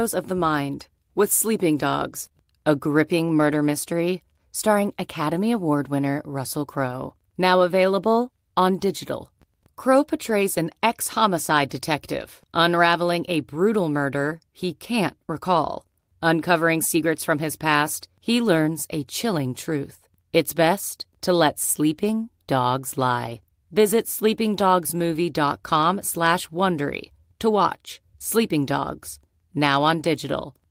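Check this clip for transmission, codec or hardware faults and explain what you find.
The clip has packet loss at three points, handled in two ways.

Lost packet rebuilt from error correction, at 2.25–2.27 s, 10.29–10.31 s and 23.25–23.35 s: dropped packets were replaced by low-bitrate copies carried in the following packet, so there is no gap. The rebuilt 20 ms, 20 ms and 60 ms stretches sound rougher and noisier.

Short concealed packet loss, at 2.29–2.46 s and 2.32–2.36 s: packets arrived too late, and the decoder extended the preceding sound to cover the holes. About 11 ms and 15 ms were filled in, with roughly 15 ms of extra time added, heard as a brief smear or wobble just after the first rebuilt packet.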